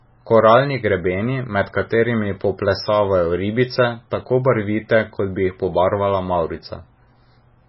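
Throughout the speech, nothing is heard above 5.6 kHz, and the damage is heavy: a watery, swirling texture, chirpy metallic sibilants and smeared onsets. This is likely MP3 compression at a very low bitrate, around 16 kbps, where the encoder drops the treble and lets weak frequency lines flicker between frames.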